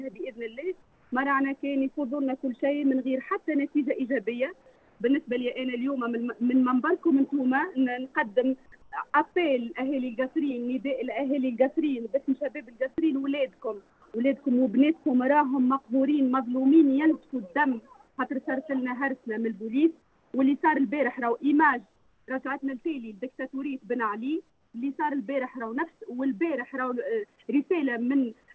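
The sender's voice detector likely treated the quiet gaps as silence and stopped transmitting, so the receiver filled them with synthetic noise. This comfort noise in place of the background occurs at 0.82–1.12, 4.76–5.00, 8.82–8.92, 13.90–14.02, 18.08–18.18, 20.02–20.34, 21.96–22.28 and 24.50–24.74 s. Each gap lasts 100 to 320 ms. In each one, the real background, about 37 to 45 dB below the loud parts, becomes a flat, featureless hiss about 2 to 6 dB quieter. Within this band-limited call sound, which has nothing above 8 kHz, that change is heard as a brief dip into dull, even noise.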